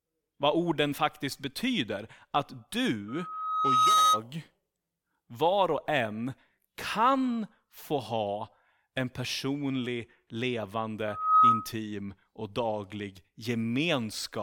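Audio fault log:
3.08–4.22 s and 11.07–11.73 s, loudspeaker feedback squeal: a single 1.3 kHz tone swells out of the speech, taking well under a second to build the first time and only a fraction of a second the second time. It peaks around 10 dB above the speech. A microphone is hearing the loudspeaker it feeds, and at this one frequency the loop gain tops unity. That build-up from nothing at a fixed pitch distinguishes it from a steady interfering tone or hum.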